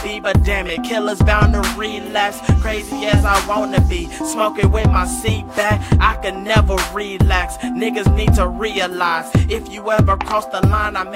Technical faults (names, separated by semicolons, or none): none